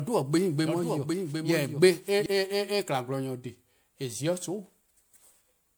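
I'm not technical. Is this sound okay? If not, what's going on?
No. Doubled audio track, from the start until 2.26 s: a second, quieter copy of the speech trails about 0.7 s behind, likely from the sound being captured or placed twice.

Generation loss, throughout: the speech sounds swirly, smeared and hollow, with blurred starts of sounds. It was likely saved again and again in a compressed format, roughly four times, each pass adding damage.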